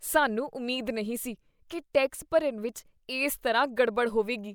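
No technical faults can be heard in the speech. At no point does anything in the recording or playback chain draw attention to itself.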